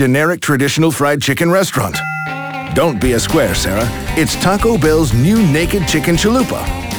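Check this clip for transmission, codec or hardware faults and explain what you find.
One fault runs through the whole clip: crude rate conversion. Throughout, a gritty, inharmonic fizz rides on the loud and bright parts of the sound, roughly 25 dB below it. The pattern fits a nearest-sample conversion from 48 kHz to 44.1 kHz, where samples are simply dropped on a fixed cycle with no filtering. The resulting timing error produces shifted, inharmonic copies of the sound itself. Unlike codec artefacts, the grit tracks level and brightness rather than swirling or smearing.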